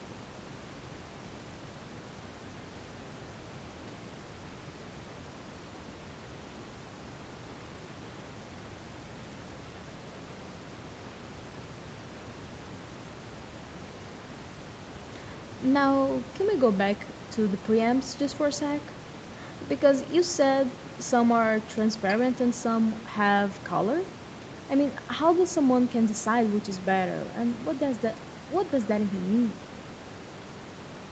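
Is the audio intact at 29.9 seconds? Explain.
Yes, the audio is intact at 29.9 seconds, with only the room's background noise about 14 dB below the speech and the call's normal microphone processing to be heard there.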